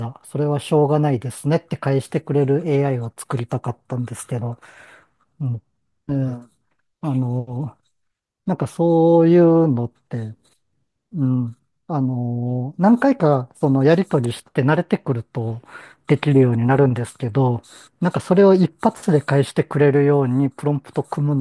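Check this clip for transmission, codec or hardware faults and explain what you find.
Nothing in the speech points to a transmission, codec or hardware problem: the signal holds steady and continuous throughout, with no audible breaks, distortion or level disturbances.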